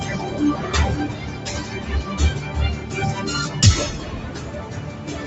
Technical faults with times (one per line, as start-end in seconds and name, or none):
0.00-5.26 noise suppressor applied to music or sounds